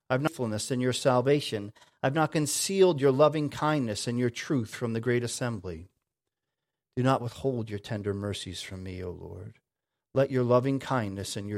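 A clock-matching routine likely changed the playback rate in a single jump twice, a drift correction step each time. From 1.29 to 2.16 s the speech runs 6.24% fast, pitched 105 cents up. From 5.74 to 6.48 s it runs 6.24% slow, 112 cents down. Both then snap back.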